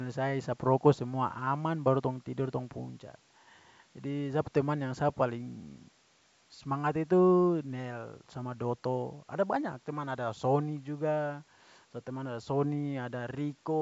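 No faults in this speech; the call microphone processing behaves as expected, trimming the lowest bass.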